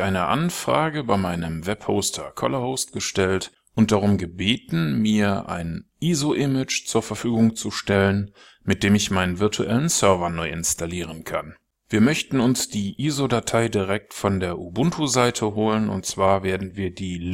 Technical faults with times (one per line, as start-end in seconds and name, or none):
none